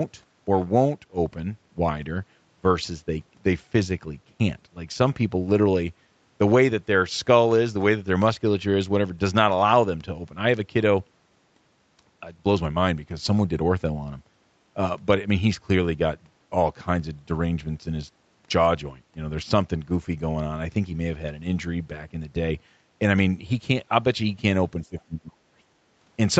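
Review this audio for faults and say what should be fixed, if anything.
Between 24.82 and 25.42 s the speech sinks by roughly 25 dB, for about half a second in all. This is speech suppressed in double talk. The likely cause is that both ends spoke at once and the echo canceller, unable to tell the near talker from loudspeaker echo, turned both down. A packet-loss dropout would leave an abrupt gap or concealment artefacts; here the level is ducked instead. Better double-talk detection in the echo canceller, or less acoustic coupling between loudspeaker and microphone, would prevent it.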